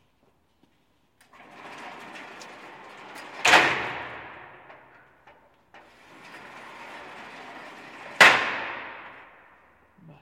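Everyday sounds, with abrupt forward jumps at 2.40, 3.72 and 9.24 s. Each is likely a dropped buffer (overrun), skipping about 40 ms, 40 ms and 70 ms.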